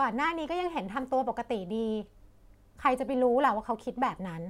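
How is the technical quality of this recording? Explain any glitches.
No technical glitches are audible.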